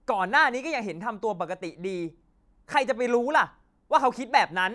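No technical faults can be heard anywhere in the speech. Nothing in the audio calls for a time or a value to be noted.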